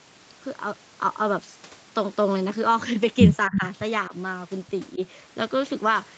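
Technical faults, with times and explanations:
3.48–3.6 s, 4.09–4.13 s and 4.95–5.0 s: speech suppressed in double talk. The speech briefly dips, by about 15 dB for around a tenth of a second at first, then by only about 5 dB. Likely an echo canceller ducking the talker while both sides spoke.
3.52–3.67 s: echo leak. A faint, delayed copy of the speech, about 10 dB below it, slips through 327 ms after the original. This is likely loudspeaker echo that the other end's echo canceller failed to remove fully and sent back.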